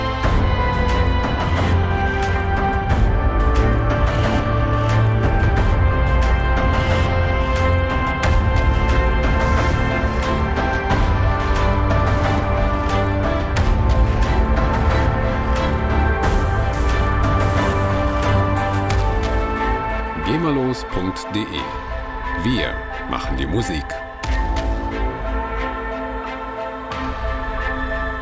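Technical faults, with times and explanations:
No technical faults can be heard in the audio.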